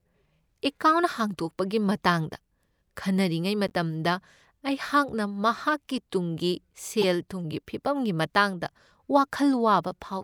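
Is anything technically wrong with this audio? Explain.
Yes. Corrupt frames were decoded at 3.67–3.72 s and 7.02–7.04 s. Damaged bits put energy at wrong frequencies, giving brief glitches: faint first, louder second.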